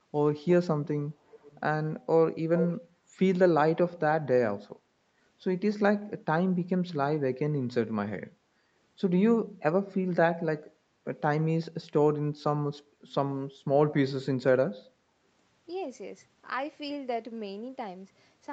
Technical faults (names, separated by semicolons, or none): echo leak